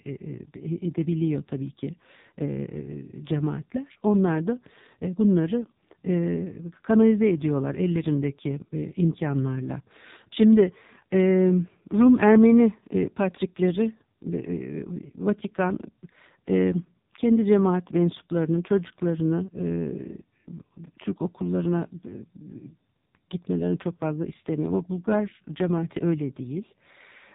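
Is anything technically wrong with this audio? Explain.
Yes, the speech has passed through an AMR narrowband mobile codec throughout. Its 8 kHz vocal-tract coding, at what sounds like a very low bitrate near 6 kbps, removes everything above 3.8 kHz and leaves voices heavily buzzy and synthetic.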